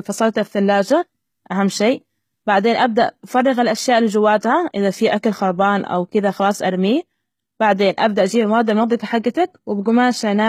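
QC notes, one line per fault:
Throughout: HE-AAC compression is the likely cause of plainly audible treble damage. The upper band sounds rebuilt from copied lower bands rather than coded, so harmonics misalign and s sounds come out gritty and lispy. Nothing reaches above 14.9 kHz, consistent with roughly 20 kbps.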